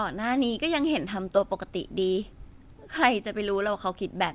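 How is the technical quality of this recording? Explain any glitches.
No glitches can be heard anywhere in the recording; the speech has the narrowband character of a telephone-style call path with nothing above 4 kHz, which fits a G.711 A-law codec running at 64 kbps.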